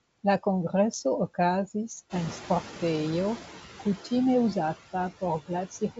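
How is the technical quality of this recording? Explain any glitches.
The recording has clear noise suppressor problems: constant processing artifacts, a lag when the background gets louder, and a clipped ending. The wideband phone coding itself is clean, with the band stopping around 7.7 kHz as expected for G.722, which sounds like the full 64 kbit/s mode.

Noise suppressor artifacts run through the whole clip. The suppressor estimates the steady background and turns down every frequency band it thinks is noise, frame by frame, here by about 11 dB. Because that gain keeps shifting, the leftover noise dips in the gaps and comes back up under the speech.

Noise suppressor catching up happens from 2.09 to 3.44 s, just after "kongreso okazis". The room noise jumps by about 12 dB at around 2 s, but the suppressor's noise estimate is still tuned to the quieter level. So the louder background comes through with only about 8 dB of reduction at first, and then settles down over roughly 1.35 s as the estimate adapts.

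Speech cut by the noise suppressor shows up at the very end, from 5.71 to 5.99 s. The suppressor mistakes some of the speech for background and pulls it down along with the noise, by as much as about 14 dB. Only about a tenth of a second in total is affected, but the tail of the speech sounds swallowed and faint, as if it got clipped into the noise floor.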